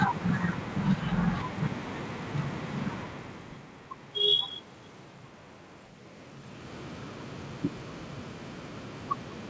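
Speech over a wideband call path with no technical faults: content stops at 8 kHz, consistent with G.722, the call's microphone processing trims the lowest bass, room noise sits underneath, and the level shifts around 3 s and again near 6 s track the talker moving relative to the microphone.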